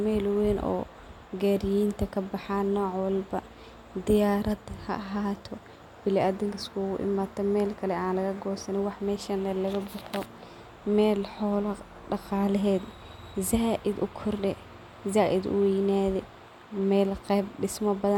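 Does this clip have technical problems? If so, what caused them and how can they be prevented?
No, there are no technical problems in this clip.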